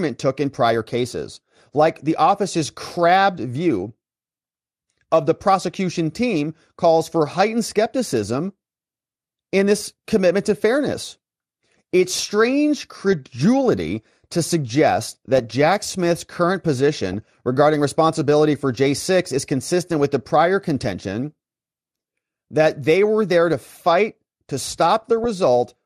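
Throughout the speech, the sound is dull and granular, with upper bands flickering in and out and a gurgling edge on what remains. This is likely MP2 compression, with too few bits for its 32 sub-bands, which fits a rate near 80 kbps.

DAB burbling appears at 13.12 s, 15.36 to 15.52 s, 17.12 to 17.14 s and 25.02 to 25.25 s. Bit errors getting past the error correction corrupt sub-band samples, producing brief blips of noise in single bands, and corrupt scale factors, so bands jump in level.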